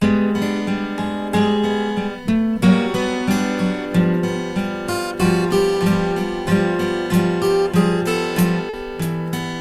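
Near the end, from about 8.69 to 8.75 s, the music shows a short concealed packet loss. Roughly 40 ms of audio arrived too late to decode, so the receiver extended the preceding sound and crossfaded back into the real signal. It is heard as a brief smear or wobble in the music. On a spectrogram, the harmonics run on as flat, unchanging lines for those 40 ms before the normal texture resumes, and the waveform shows a looped-looking stretch.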